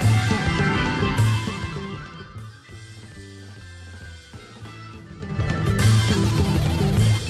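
Zipper noise runs from 5.11 to 5.48 s. The level changes about 20 dB in 5 dB steps, roughly ten per second, each step clicking.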